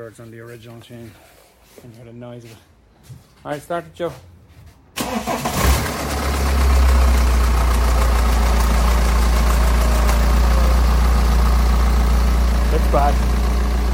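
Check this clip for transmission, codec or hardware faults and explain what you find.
No transmission, codec or hardware faults can be heard here.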